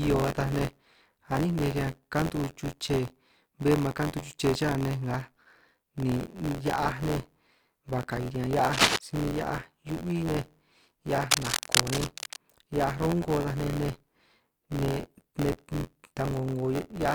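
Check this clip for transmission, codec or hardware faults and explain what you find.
Two faults are audible: buffer tearing through the whole clip, and two bursts of cable scratch noise.

Buffer tearing runs throughout. A robotic rattle at 86.1 Hz sits on the speech, which fits a 512-sample buffer. About a tenth of each buffer replays audio roughly 20 ms old.

Cable scratch noise appears at 8.72 to 8.96 s, just before "si min hia'aj", about 5 dB above the speech. It returns at 11.31 to 12.37 s, about level with it. The rustling is likely from a worn contact changing resistance.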